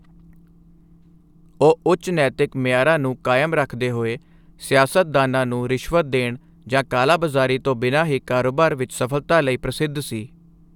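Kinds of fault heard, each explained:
No technical faults are audible.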